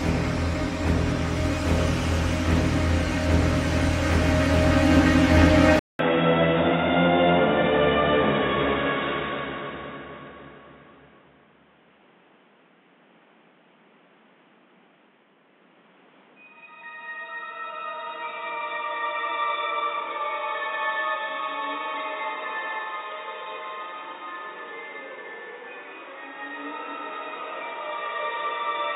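At 5.79 s the audio cuts out for about 200 ms and then returns through a poorer device. From that point to the end, nothing above 3.8 kHz survives, so the sound turns dull and boxy. The level drops by roughly 5 dB, and a new noise floor appears around 30 dB below the signal. The likely cause is the input switching mid-recording to a lower-grade microphone or a headset's narrowband call profile.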